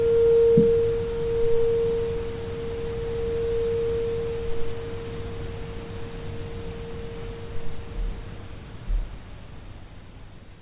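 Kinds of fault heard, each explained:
No faults can be heard anywhere in this audio.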